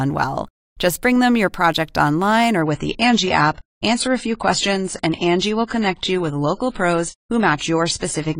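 Speech recording with an adaptive stream at a lower bitrate: from 2.62 s, right after "your project online or", quality abruptly drops with no gap, nothing above 10 kHz and added codec artefacts, consistent with a step from 96 to 24 kbit/s AAC.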